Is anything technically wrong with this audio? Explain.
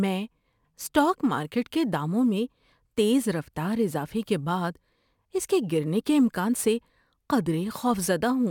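Yes. Sample clock jitter runs through the whole clip. The converter's clock wanders by a few microseconds, so each sample is captured slightly early or late. Where the speech waveform changes fastest, that timing error becomes an amplitude error, sitting around 30 dB below the signal. It comes across as a grainy hiss riding on the speech, strongest on loud and bright sounds like sibilants, and falling away completely in the pauses.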